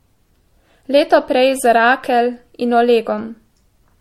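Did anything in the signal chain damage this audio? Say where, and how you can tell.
Yes, at the codec stage throughout: hollow, swirly speech, smeared attacks, nothing above 16.5 kHz. It is too degraded for one MP3 pass near 64 kbit/s, so likely generation loss from repeated re-encoding.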